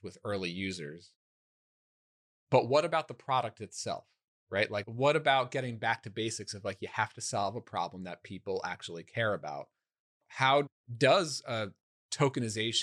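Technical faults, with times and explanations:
No technical faults are present in the speech.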